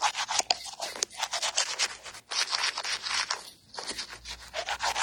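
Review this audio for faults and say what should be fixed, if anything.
AAC compression runs through the whole clip. Nothing is left above about 17.3 kHz. The coding damage is plainly audible, with a dull, smeared texture. The cause is likely AAC-LC at a low bitrate, which fits about 32 kbps. The coder drops and coarsely quantises frequency detail it judges least audible. To prevent this, export at a higher AAC bitrate or keep a lossless master.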